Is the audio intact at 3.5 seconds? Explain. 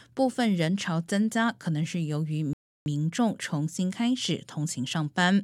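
Yes, the audio is intact at 3.5 seconds, with no fault at that moment.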